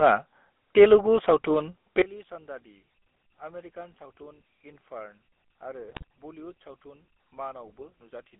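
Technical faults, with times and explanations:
throughout, GSM full-rate codec: The speech has a buzzy, gravelly roughness from a pulse-excited vocal-tract model, which fits the 13 kbps full-rate coder. On a spectrogram the energy sits between 250 Hz and 3.4 kHz, with coarse, smeared harmonics and nothing above the cut-off.
2.02–8.40 s, one channel inverted: The level falls by about 22 dB and the centred speech turns faint, likely because one channel's polarity is reversed, so the shared content cancels when summed to mono. The waveform shrinks abruptly, and the spectrogram darkens across all bands.
5.88–6.04 s, GSM bit errors: The speech breaks into squawks, pops and gargling as corrupted filter, pitch and gain values reach the decoder. This points to a badly errored link across a short run of frames. The spectrogram shows blocky, distorted bursts.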